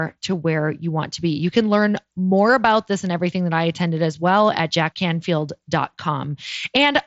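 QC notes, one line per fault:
No faults to note.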